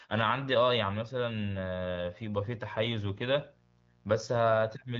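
From 1.80 s to the end, a mains buzz sits about 35 dB below the speech: a steady, raspy rasp. Switching spikes twice per 60 Hz cycle spread harmonics into the kilohertz range, drawn on a spectrogram as evenly spaced horizontal lines, with sharp 120 Hz ticks in the waveform, all ending at the HD Voice band edge near 7.2 kHz.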